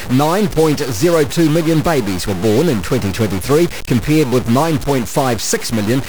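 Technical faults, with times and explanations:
throughout, stuck bit: harsh buzz and noise-filled pauses, likely one bit stuck with a step of about -20 dBFS; unlike clipping, quiet passages distort too.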